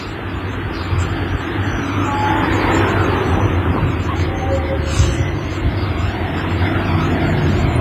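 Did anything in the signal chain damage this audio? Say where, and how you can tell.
Yes, the damage sits at the codec stage, and it's almost certainly WMA compression. It runs through the whole clip as a ringing, washy smear, with a hiss that swells and fades along with the sound, and there's nothing at all above 15.4 kHz. That's a transform coder using long blocks, which spreads quantisation noise over tens of milliseconds and zeroes the weaker components. The heavy damage fits a low bitrate around 24 kbps, likely from a basic WMA 1 encoder.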